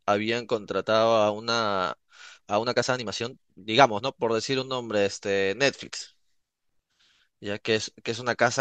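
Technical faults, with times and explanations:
1.88 to 4.14 s, time-stretched section: the speech suddenly runs about 1.35 times faster, then returns to normal pace. The pitch does not rise with the speed. The passage sounds rushed. The likely cause is software squeezing this stretch to fit a shorter length. It keeps the pitch by dropping short slices of audio, and removing them is what gives the hurried pace.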